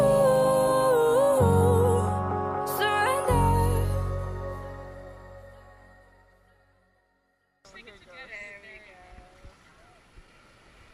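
No technical faults can be heard anywhere in the audio.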